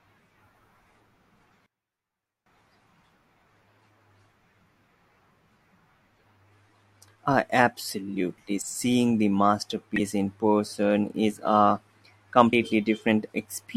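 From 1.66 to 2.46 s the speech collapses by about 24 dB into a faint residue and then returns at full level. The likely cause is one channel inverted: with one side of the stereo pair flipped in polarity, the material common to both channels cancels when they are summed to mono. The voice and background nearly disappear, leaving only the faint difference between the channels.

At 9.96 to 10.01 s and again at 12.52 s, compressed frames are skipped. Each time, whole frames of the encoded stream are not decoded, either because they are missing or because the decoder rejected them as corrupt. Playback jumps forward by roughly 70 ms of audio. At each join the speech lurches slightly ahead.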